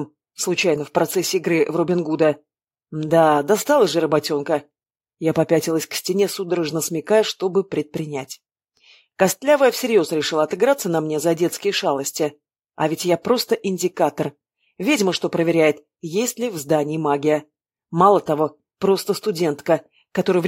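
No technical faults can be heard anywhere in the audio, and the signal holds steady and continuous throughout.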